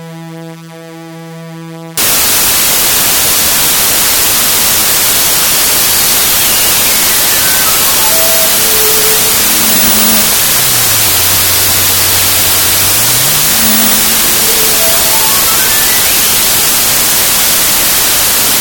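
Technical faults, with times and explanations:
1.97–18.61 s, wrong sample width: harsh, loud noise buries the sound, which plays 1.33 times fast and high, fitting packed 24-bit samples read four bytes at a time.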